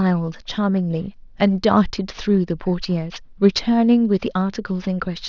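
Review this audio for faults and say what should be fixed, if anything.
Sibilants carry a gritty, metallic edge from start to finish, and the top of the spectrum runs hard up to a wall near 6 kHz with no natural roll-off. That is aliasing: the speech was resampled down, which fits a drop from 24 kHz to 12 kHz, without a low-pass filter first, so energy above 6 kHz folded back as false, unrelated tones, roughly 25 dB below the speech. Prevent it by applying a proper anti-aliasing filter before any sample-rate reduction.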